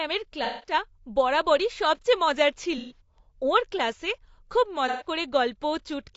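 Throughout, the speech sounds rough and grainy, with noise between harmonics, most likely from low-delay AAC compression at a low bitrate, around 32 kbps. At 0.44–0.73 s, 2.78–3.00 s and 4.88–5.08 s, AAC frame loss with concealment leaves smeared, noisy patches. These are not silent gaps, because the decoder repeats the last good spectrum to fill them.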